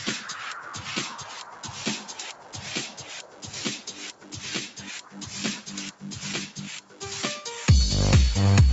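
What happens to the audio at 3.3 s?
A noise suppressor designed for speech is left running on this material, and between 3.23 and 3.43 s it treats the sound as noise and clamps down on it. For those 0.2 seconds the level sinks by about 6 dB at its deepest. Whatever is sustaining or decaying there loses body and has its tail shortened, while any sharp onset slips through more intact. The effect is a brief dip rather than a clean gap.

That dip sits inside a wider pattern. Because the suppressor stays engaged across the clip, it keeps mistaking steady tones, ambience and reverberant decay for background noise. Its gain swings by something like 10 dB as it decides what to hold back. Around 3.3 s held sound sinks while attacks mostly get through.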